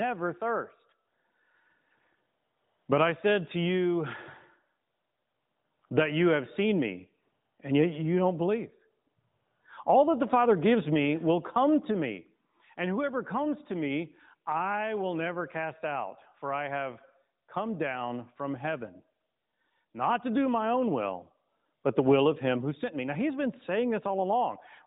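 No technical faults can be heard anywhere in this speech recording. It comes through an AMR narrowband mobile codec path, with nothing above about 3.8 kHz and only light codec coloring, which fits AMR-NB at its 12.2 kbps rate.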